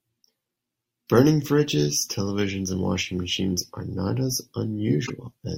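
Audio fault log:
2.70 s and 5.05–5.10 s, corrupt frame decoded: short garbled blips, the first a single frame peaking around -25 dBFS, the second spanning a few frames and louder at about -20 dBFS. Damaged bits were decoded anyway, so energy landed at the wrong frequencies.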